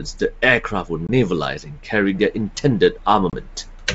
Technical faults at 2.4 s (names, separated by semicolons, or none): none